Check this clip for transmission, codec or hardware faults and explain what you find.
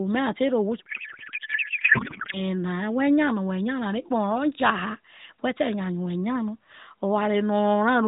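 One fault stands out, a codec payload misread from 0.80 to 2.42 s. The AMR frames are being unpacked with the wrong layout, octet-aligned data parsed as bandwidth-efficient, so every field is shifted and decoded into garbled noise and warble that hardly follows the speech. On a spectrogram, the harmonic speech structure vanishes into smeared, unstructured energy below 4 kHz, and the waveform loses its syllable envelope for that stretch. Around it, the AMR narrowband mobile codec shows a hard 4 kHz ceiling, with light coding roughness that fits its 12.2 kbps mode.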